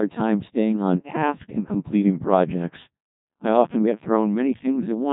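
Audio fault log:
throughout: Codec 2 vocoder. The speech sounds robotic and buzzy, rebuilt from sine waves instead of the original waveform. Only pitch, voicing, loudness and a coarse spectral shape come through. The heavy smearing fits a rate near 1.2 kbit/s. Nothing reaches above 3.8 kHz.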